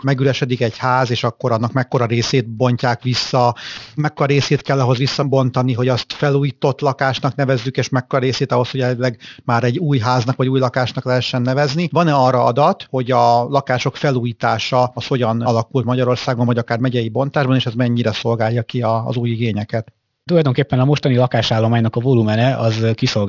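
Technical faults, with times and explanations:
Throughout, aliasing: the speech was resampled to a rate implying 12 kHz without filtering above 6 kHz, so sibilants fold back as gritty, metallic tones roughly 20 dB below the voice.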